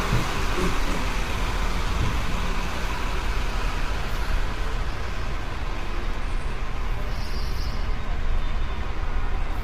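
Throughout, the sound is grainy and rough, with noise filling gaps in tonal detail and nothing above 15.8 kHz, likely from heavy low-delay AAC compression at about 24 kbps.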